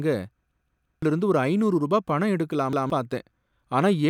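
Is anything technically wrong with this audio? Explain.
Yes, there are two repeated-buffer stutters. From 0.51 to 1.02 s, just before "இருந்து ஒரு ஐநூறு ரூபா", one 171 ms chunk plays four times with hard joins, which fits an 8192-sample buffer, so about half a second of speech is lost. Then from 2.73 to 2.90 s, right after "ஒரு ஐநூறு ரூபா பணம்", a chunk repeats once more. Each time, fresh audio didn't arrive in time, so the device replayed its last buffer.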